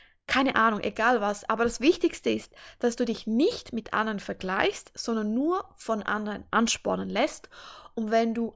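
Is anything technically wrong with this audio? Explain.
No, nothing technically wrong can be heard here.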